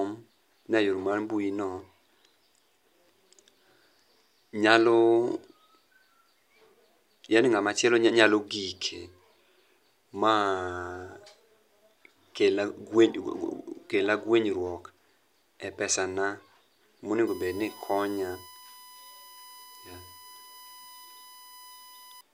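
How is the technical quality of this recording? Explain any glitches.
The recording carries one clear fault, a steady tonal whine laid under the speech near the end.

USB whine runs from 17.27 s to 22.21 s: a fixed 1 kHz tone roughly 20 dB below the speech. The USB bus's 1 ms frame activity pulls current in regular bursts that leak into the audio path through shared power or ground, producing this constant, pitch-stable whine.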